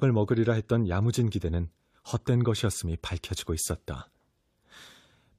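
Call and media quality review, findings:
No faults found in speech.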